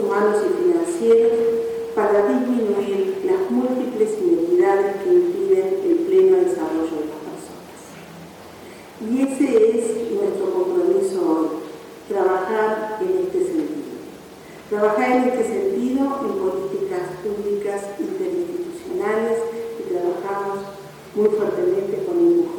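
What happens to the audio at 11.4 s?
Nothing goes wrong at 11.4 s; the audio plays through that moment intact, with no dropout, click or other fault.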